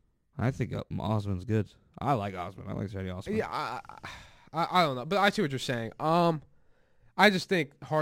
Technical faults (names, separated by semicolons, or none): crude rate conversion